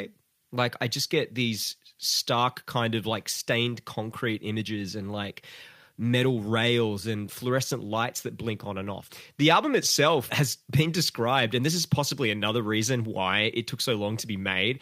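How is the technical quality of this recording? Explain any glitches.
Nothing in the recording stood out as a technical problem on listening, so there are no glitches to explain.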